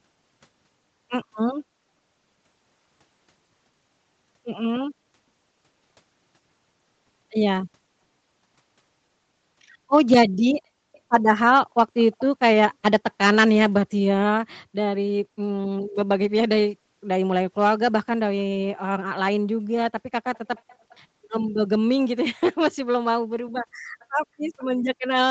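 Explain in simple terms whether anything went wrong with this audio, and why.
An echo leak shows up as faint, delayed copies of the speech trailing about 0.36 s behind it, at 10.92–11.0, 11.98–12.25, 20.35–20.39, 20.56–20.96, 23.99–24.06 and 24.58–24.66 s. The likely cause is a loudspeaker at the other end whose echo canceller let some of its microphone pickup slip back into the call.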